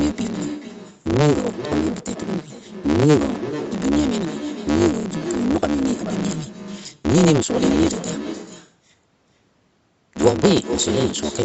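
Speech that runs about 1.6 times too fast without sounding higher in pitch, under a steady 150 Hz buzz, which marks a block size mismatch (truncated): each 512-sample block is cut short before being read, and the missing tails produce both the speed-up and the buzz. A simply sped-up recording would rise in pitch. Throughout, there is also echo with no canceller: a quieter, thinner copy, about 11 dB down, trails each phrase by roughly four tenths of a second. That is a distinct repeat rather than the smooth tail of room reverberation. The call's microphone processing band-limits the sound at 8 kHz.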